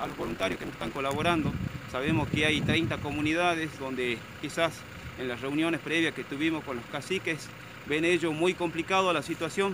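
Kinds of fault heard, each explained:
Block size mismatch (truncated): One stage hands on longer blocks than the next stage takes in, so the tail of every block is dropped. In the first 0.97 s this shows as a steady buzz at 100 Hz, the rate at which blocks are cut. The sound also runs 1.16 times fast while keeping roughly its normal pitch. That ratio fits 512-sample blocks being read short.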